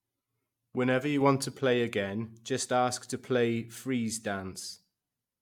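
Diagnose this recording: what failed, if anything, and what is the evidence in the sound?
Sudden gain jump, 1.21 to 1.59 s, before "again just ask to": sound and noise floor step up about 4 dB together, likely an unramped digital gain change in processing.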